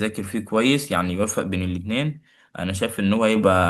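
At 3.36 s the microphone volume is stepped up: the call software judged the input too quiet and raised the device gain by about 5 dB in a single step, so the speech and the background noise jump louder together, abruptly.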